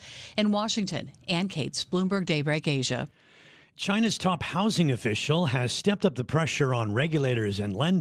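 Speech with lost packets rebuilt from error correction at 0.81–0.99 s, 1.95–2.29 s, 3.99–4.13 s (before "top housing official has") and 6.89–7.35 s (after "stepped up the pressure"). Unlike plain packet loss, nothing drops out. Low-bitrate backup copies fill each gap, so these stretches sound rougher and noisier but never go silent.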